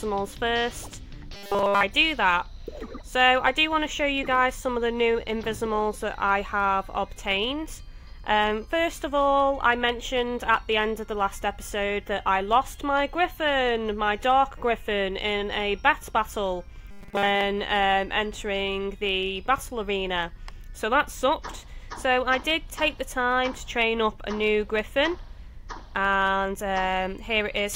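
Audio likely arrived too seldom, so a 5 ms buffer was replayed in place of skipped material, producing robotic sound from repeated short buffers: a rigid 200 Hz buzz throughout 1.33–1.83 s and over most of 16.91–17.44 s.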